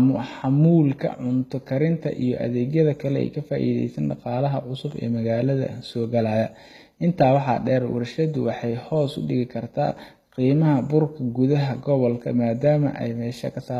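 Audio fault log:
throughout, HE-AAC compression: plainly audible codec damage, with gritty, lispy s sounds and nothing above 14.9 kHz. The likely cause is HE-AAC, fitting a bitrate around 20 kbps, which rebuilds treble from copied lower bands, so harmonics misalign across the crossover.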